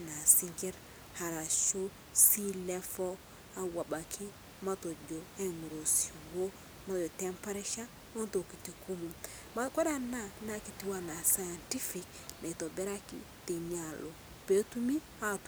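No technical faults occur anywhere in this speech clip.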